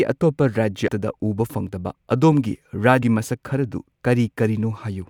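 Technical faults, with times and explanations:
0.88 s and 3.02 s, compressed frames skipped: the speech lurches forward, losing roughly 0.3 s and then 0.2 s. Whole coded frames were missing or rejected by the decoder, so playback jumps by several frames, which fits 32 ms frames.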